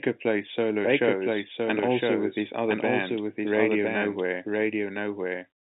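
Right from the start, the speech carries a doubled audio track: a second full-band copy trails about a second behind at roughly the same level, completely dry, over the phone-band sound. Likely the audio's being picked up twice, once through a slower path.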